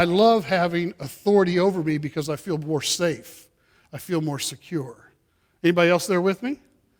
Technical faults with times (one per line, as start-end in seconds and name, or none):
none